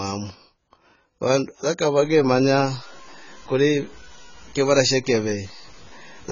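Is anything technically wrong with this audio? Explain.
Yes, there are two faults. Throughout the speech, the sound is dull and smeared, with nothing above 7.1 kHz and a warbling, fizzy texture on sibilants. This is likely AAC compression starved of bits, which fits AAC-LC at about 16 kbps, and its heavy damage sits in the spectrum, unlike level-dependent grit.

From 2.03 s, just after "vandu ya", to the end at 6.32 s, low bit depth without dither turns quieter passages gritty. The grain follows the signal at roughly 25 dB down, which fits truncation to about 7 bits. Unlike codec fizz, it tracks loudness rather than frequency.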